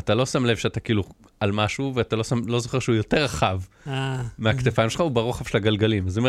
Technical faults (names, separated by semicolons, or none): none